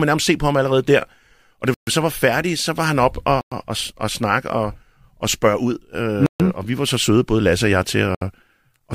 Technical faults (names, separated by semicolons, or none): Bluetooth stall